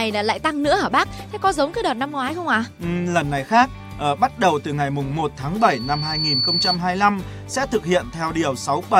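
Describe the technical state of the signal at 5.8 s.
At 5.8 s a loudspeaker feedback squeal (5.60–6.80 s) builds: loop gain exceeds one at 4.5 kHz, a brightening spectrogram line nearing signal level.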